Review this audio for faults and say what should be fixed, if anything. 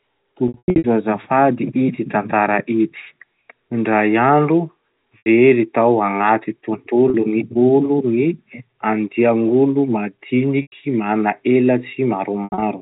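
You've got packet loss with pitch repetition in five spots: 0.48–0.84 s (about 280 ms lost in bursts, right before "azafady ity tantara ity"), 5.18–5.26 s (just before "tao agnaty"), 7.10–7.14 s (right after "tao agnaty"), 10.62–10.72 s and 12.44–12.62 s. The receiver loops the last pitch period over each gap, which fits 20 ms packets. The short gaps get a held, buzzy tone, and the longer bursts fade toward silence before the cross-fade back in. The G.711 telephone band sounds as expected. A bigger jitter buffer or forward error correction on the link should stop this.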